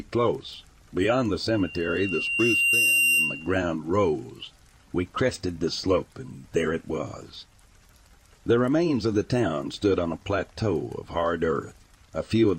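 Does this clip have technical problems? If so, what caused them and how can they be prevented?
Yes: loudspeaker feedback squeal from 1.52 to 3.54 s, a 2.8 kHz tone swelling over about a second and a half to roughly 5 dB above the sound, showing as a bright horizontal spectrogram line and a growing waveform envelope. Lowering gain, repositioning the microphone, or notching 2.8 kHz prevents it.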